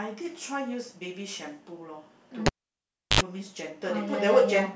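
At 2.46 s the cable is pulled and plugged in: a pop, about 0.69 s of near silence, a 73 ms burst of 50 Hz mains buzz, then another pop at 3.21 s.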